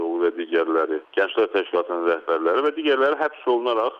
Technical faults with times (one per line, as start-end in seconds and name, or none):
none